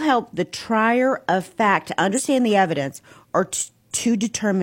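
At 2.14 s, right after "trier of fact to", there is about 70 ms of damaged data in the compressed stream, lasting until 2.21 s, with "the evidence or" following. Corrupted bytes in that part of the file leave the decoder unable to parse the affected frames, so it loses sync and hunts for the next valid frame header. The result is a brief glitch in place of the speech before decoding picks up again.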